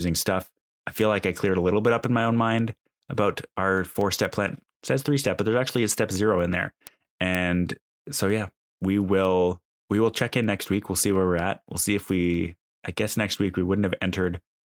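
The clip is speech with one lost packet rebuilt from error correction at 5.23 s. There is no gap or dropout. A single roughly 20 ms stretch instead turns briefly rougher and noisier, which fits one lost packet whose content the decoder recovered from the low-bitrate backup copy carried in the next packet. On a waveform the envelope stays continuous with no flat silence. A spectrogram shows a thin column of smeared, grainier detail there rather than a blank stripe.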